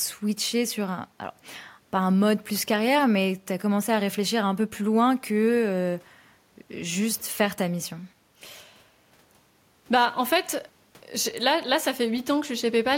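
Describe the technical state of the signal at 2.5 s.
At 2.5 s the signal is intact, with no audible dropout, distortion, noise or other technical fault.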